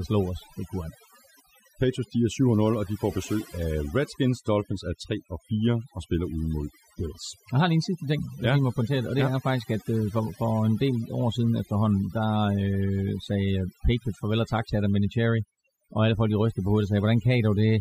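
Overdone noise removal runs throughout: aggressive spectral suppression leaves near-silent gaps sprinkled with twinkling specks, and quieter speech components vanish.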